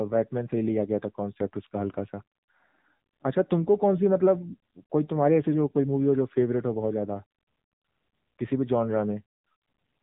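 From start to finish the speech has the AMR narrowband mobile codec sound: nothing above about 3.8 kHz, plus an obvious buzzy, synthetic edge from pulse-driven vocal-tract modelling. That level of damage fits a low mode around 7.4 kbps, like an old phone call.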